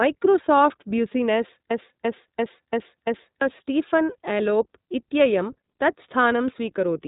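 Speech coded with the iLBC codec, whose rough, synthetic quality fits its 15.2 kbps, 20 ms frame mode; a spectrogram shows nothing above 4 kHz. From 1.71 to 3.41 s a system hang loop repeats one 341 ms slice five times, a stutter at 2.93 Hz that fits a 16384-sample buffer. The waveform shows identical blocks, and roughly 1.5 s of audio is lost.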